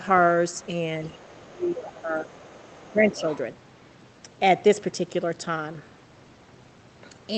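From 0.57 to 0.68 s a faint second voice sits under the speech, roughly 30 dB down. This is the other side's voice leaking through: the far end was most likely playing on a loudspeaker and reaching the microphone, and the echo canceller left a residue. It returns from 1.06 to 1.47 s at a similar low level. Within that stretch, from 1.1 to 1.2 s, the near talker dips by about 10 dB. This is speech suppressed in double talk: with both sides active, the canceller likely could not tell the talker from the echo and attenuated both. A longer suppression follows from 1.45 to 2.31 s, affecting roughly 0.7 s, with the deepest drop about 15 dB. Inside it, from 1.88 to 2.01 s, the leaked voice is more prominent, only about 20 dB under the speech. Leakage continues from 2.32 to 2.9 s at around 30 dB down. From 2.91 to 3.27 s the talker is pulled down again by about 10 dB across roughly 0.3 s. Starting during that dip, from 3.12 to 3.38 s, the far voice leaks through once more at about 25 dB below the speech.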